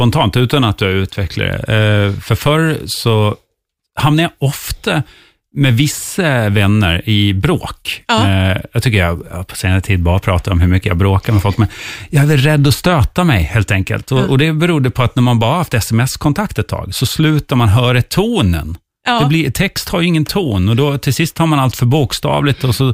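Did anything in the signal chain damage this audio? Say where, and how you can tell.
No, nothing I can hear in this speech suggests any stage of the chain damaged it, so there's nothing here to chase down.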